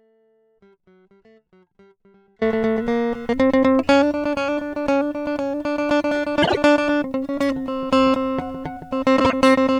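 A music clip with two kinds of fault. It opens in an audio dropout to a faint residue. The dropout is already under way at the start and lasts until 2.41 s. Only a faint leak remains, about 35 dB below normal level. The music then returns abruptly. The likely cause is a signal path that lost its feed but stayed live. Frames out of order occur at 6.42 to 6.58 s and 9.19 to 9.33 s. In each, two 52.2 ms blocks swap places. The result is a brief garbled flutter. No time is lost. The block length fits pairs of roughly 26 ms frames.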